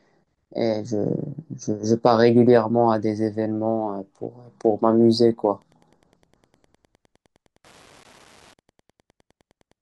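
From about 5.53 s right through to the end of the speech, there's Wi-Fi interference: a steady little ticking, close to ten clicks a second, sitting well under the voice at roughly 35 dB down. That rate matches a Wi-Fi beacon going out every 102.4 ms. A radio close to the audio circuit is throwing off those bursts, and the circuit rectifies them into audible pulses, which is why it sounds like a faint, regular clock.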